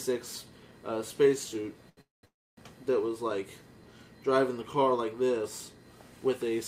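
Around 1.89 to 1.99 s there's a short stall from a late packet: the last sound gets held for about 77 ms until the packet shows up, and then the audio carries on with nothing lost. Right after that come two call audio freezes, 2.01 to 2.25 s and 2.25 to 2.59 s. Each one holds the sound as a fading buzz or hiss that drops to silence for about 160 ms and then about 260 ms before the audio resumes where it stopped. These are likely packets held up in transit that left the jitter buffer empty.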